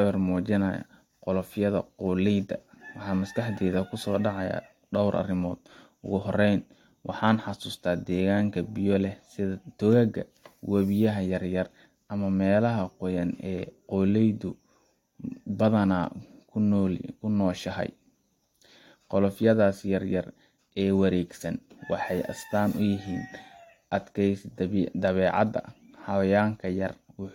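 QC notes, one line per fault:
No faults heard.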